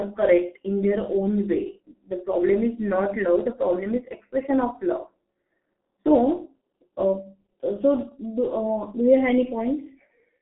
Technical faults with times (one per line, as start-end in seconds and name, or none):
0.00-10.42 G.723.1 codec